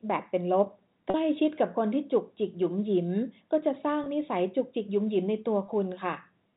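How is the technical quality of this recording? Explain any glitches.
There are three short dropouts, each patched over by packet loss concealment with pitch repetition. They sit at 1.10 to 1.14 s (40 ms, which fits two lost packets), 4.04 to 4.06 s and 5.66 to 5.68 s (20 ms each, about one packet apiece). When audio goes missing, the receiver loops the last pitch period to fill the hole, so you hear a brief held, slightly buzzy smear. The G.711 telephone coding underneath keeps everything below 4 kHz.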